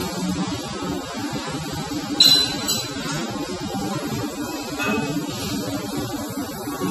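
Throughout, transcoding between lossy codecs, likely a low-bitrate AAC pass then WMA, stacks the artefacts of both so they are heard together, with the lowest cut-off in the chain kept.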